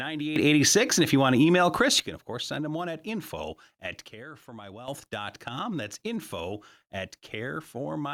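A speech clip with two sudden gain jumps. At 0.36 s the level leaps up by about 11 dB. It holds there until 2.0 s, just before "you can of course". At 4.08 s, right after "one at info at", the level drops by about 10 dB and stays down until 4.88 s. Speech and background noise shift together at each edge. The likely cause is a digital gain change applied instantly, with no ramp.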